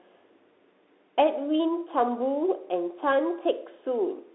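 Throughout, a Bluetooth CVSD headset codec confines the speech to roughly 300 Hz to 3.7 kHz, and its one-bit slope tracking adds scratchy sibilants and granular hiss that plain band-limiting lacks.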